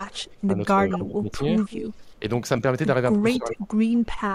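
Speech with two recurring faults. Speech suppressed in double talk appears at 0.06–0.56 s, 0.94–1.32 s, 1.91–2.23 s and 3.13–3.68 s. The voice dips by roughly 10 to 20 dB, likely because an echo canceller ducked it while the far side also spoke. Unlike a level fade, these are uneven, piecemeal drops. Echo leak appears at 0.9–0.97 s, 1.58–1.88 s and 3.33–3.56 s as a distinct copy of the voice 238–239 ms late and roughly 10 to 15 dB quieter, likely residual loudspeaker pickup. Its clear fixed delay sets it apart from smeared room reverberation.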